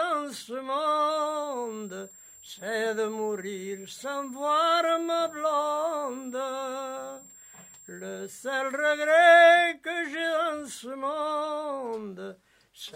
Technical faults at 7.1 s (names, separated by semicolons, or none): switching supply whistle